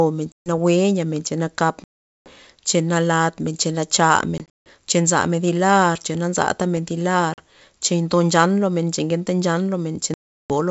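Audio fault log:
0.32–0.50 s, 1.84–2.33 s, 4.38–4.70 s, 7.34–7.40 s, 10.14–10.55 s: packet loss on an ADPCM call. Hard-edged silent gaps of about 140, 420, 200 (scattered, longest run 160 ms), 40 and 360 ms, consistent with packets of around 20 ms. Each gap cuts the speech abruptly. Afterwards the decoder's predictor and step size no longer match the sender's, so the speech comes back slightly distorted before settling.
6.37–7.18 s: CD scratch ticks. Five short ticks, the longest around a millisecond, spaced in a regular rhythm that matches one disc revolution per tick. The scratch destroys more data than error correction can rebuild, so the player interpolates or mutes those samples. The ticks are of uneven strength, sitting over the wideband G.722 speech band.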